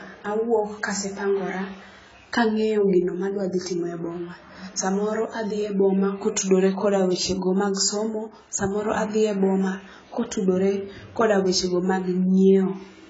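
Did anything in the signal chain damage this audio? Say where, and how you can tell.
Yes. AAC compression is present throughout the clip. The speech sounds dull and smeared, with nothing above 7.7 kHz and a warbling, fizzy texture on sibilants. That points to a likely codec-stage cause, with AAC-LC at a rate that fits about 16 kbps, cutting upper bands and coarsely quantising the rest.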